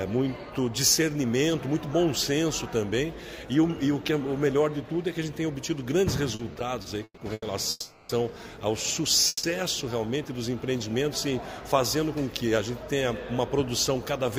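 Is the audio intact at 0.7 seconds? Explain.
Yes, at 0.7 s the audio runs cleanly, with no dropout, click, distortion or other fault at that point.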